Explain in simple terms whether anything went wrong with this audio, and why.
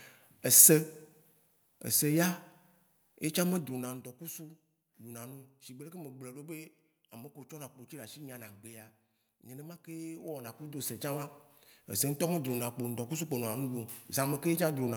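Yes, there's one problem: zipper noise from about 10.2 to 11.4 seconds. The speech changes a lot in level there, but in small, unsmoothed steps, about ten a second, and each jump leaves a tiny click, so you hear a ticking zip under the speech.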